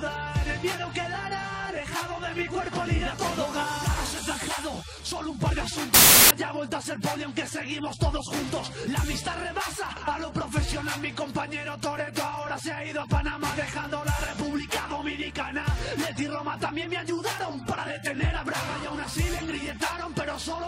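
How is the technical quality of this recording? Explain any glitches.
There is one glitch. From 5.94 to 6.31 s, samples built from the wrong bytes: misassembled bytes make low bits dominate, giving a loud, harsh broadband noise burst, a dense waveform block, and broadband spectrogram smear.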